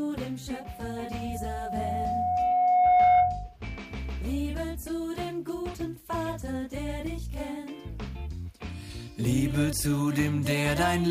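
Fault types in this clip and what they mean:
Loudspeaker feedback squeal: the microphone hears its own loudspeaker, and a 724 Hz tone circulates with loop gain above one, swelling over about three seconds to roughly 10 dB above the sound. On a spectrogram it is a bright horizontal line from 0.56 to 3.57 s; the waveform envelope climbs steadily.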